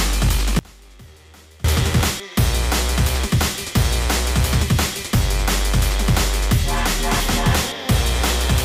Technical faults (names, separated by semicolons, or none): audio dropout to a faint residue